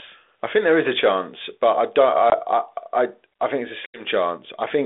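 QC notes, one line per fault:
2.30–2.40 s and 3.86–4.04 s, packet loss on an ADPCM call: sharp silent holes after "chance but I don't" and "I think it's a" (20 and 80 ms lost). The decoder's predictor falls out of step, so speech returns slightly distorted before settling.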